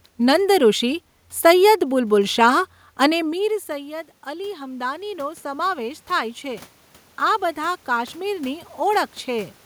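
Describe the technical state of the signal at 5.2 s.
At 5.2 s you're in the middle of an automatic gain rise that runs from 3.17 to 6.72 s, ending just before "આ બધા કાશ્મીરની". The talker moved off-mic around 3 s and the level dropped about 18 dB, so the AGC slowly pushes about 8 dB back. Voice and room noise swell up together.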